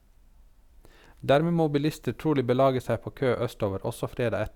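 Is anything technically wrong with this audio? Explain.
No, nothing is technically wrong with this audio. It is a short speech recording, and no technical fault can be heard anywhere in it.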